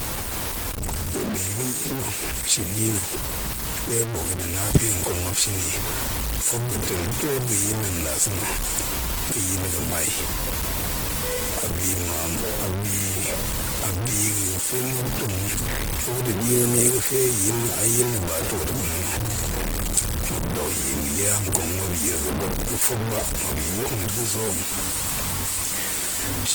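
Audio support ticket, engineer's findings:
Low bit depth without dither, throughout. Grainy, gritty distortion riding on the speech, error tracking the signal, noise roughly as loud as the speech itself. Likely cause: truncation to very few levels without dither, fitting a 5-bit word.

Opus compression, throughout. Plainly audible codec damage: tones rough, noisy and grainy rather than swirly. Fullband music-mode (CELT) character, content reaching about 20.1 kHz; sparse bits filling bands from folded or noise content. Likely cause: a low rate, fitting about 16 kbps.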